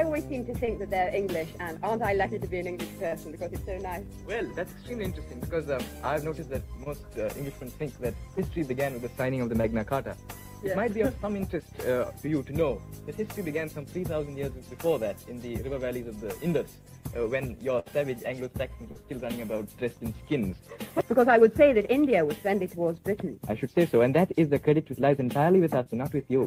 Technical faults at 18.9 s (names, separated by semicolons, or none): short concealed packet loss